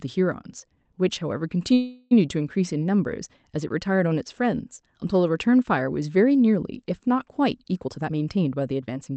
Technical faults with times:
1.73-2.13 call audio freeze
7.85-9.16 jitter buffer speed-up

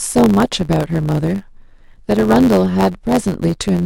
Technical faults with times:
0.00-3.85 block size mismatch (truncated)

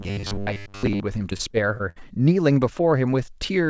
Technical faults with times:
0.01-1.00 robotic sound from repeated short buffers
1.30-2.03 repeated packet loss (robotic sound)

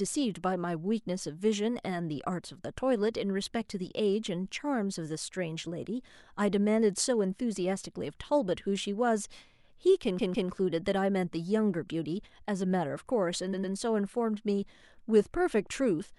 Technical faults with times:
10.18-10.49 repeated frames
13.52-13.73 repeated frames

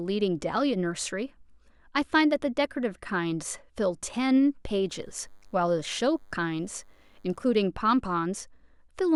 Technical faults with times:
4.89-7.66 DECT cordless phone buzz

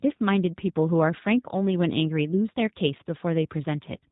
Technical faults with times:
0.00-4.11 G.729 codec

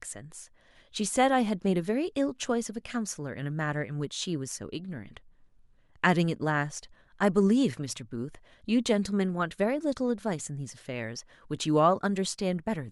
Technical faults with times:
none

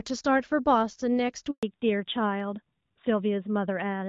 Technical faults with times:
1.51-1.63 handover gap
1.63-4.08 fallback to narrowband

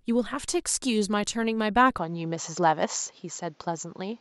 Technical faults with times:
1.98-4.21 input switched to a poorer device

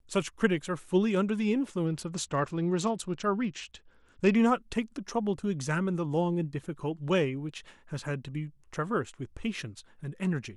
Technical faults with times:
1.86-4.35 Bluetooth SBC bit pool drop

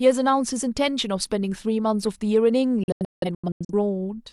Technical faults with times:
2.83-3.73 digital broadcast dropout

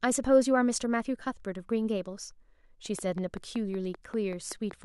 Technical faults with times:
2.99-4.72 train of clicks

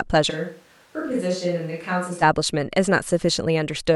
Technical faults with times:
0.31-2.21 switch to a distant microphone

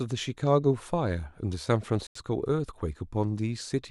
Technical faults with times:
2.07-2.17 Bluetooth dropout

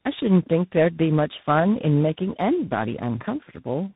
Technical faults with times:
0.00-3.96 tandem speech coding

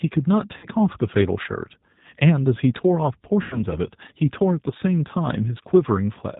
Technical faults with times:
0.00-6.39 G.729 codec
0.57-0.67 VoIP packet loss concealed by the speech codec
3.42-3.64 VoIP packet loss concealed by the speech codec

